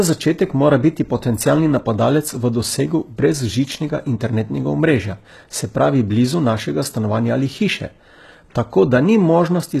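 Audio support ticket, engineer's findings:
HE-AAC compression, throughout. Treble gritty and metallic on s sounds, nothing above 12.4 kHz. Likely band replication copying lower bands upward under a coarse envelope, harmonics misaligned at the crossover. Plainly audible damage fits roughly 16 kbps.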